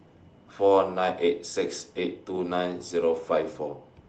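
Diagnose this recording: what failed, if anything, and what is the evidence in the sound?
Nothing in the recording points to a failure at any stage. The speech has come through a WebRTC call path working as it should, with the top end stopping at about 8 kHz, which fits the Opus codec at ordinary call settings.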